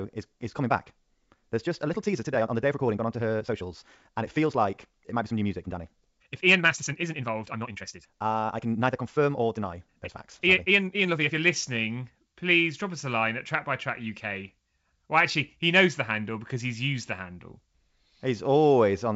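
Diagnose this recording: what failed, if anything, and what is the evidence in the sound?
Speech from 0.0 to 11.36 s sounds rushed, 1.77 times normal pace at unchanged pitch: a time-stretched section, likely from editing software dropping short pieces.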